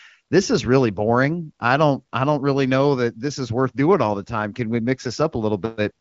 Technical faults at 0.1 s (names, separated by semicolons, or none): none